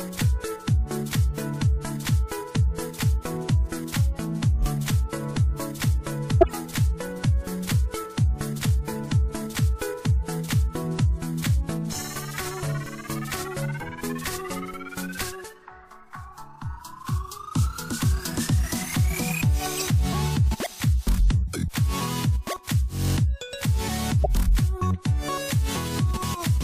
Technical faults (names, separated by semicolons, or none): corrupt frame decoded